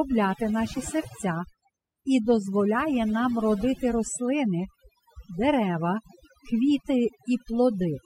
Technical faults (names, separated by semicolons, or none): overdone noise removal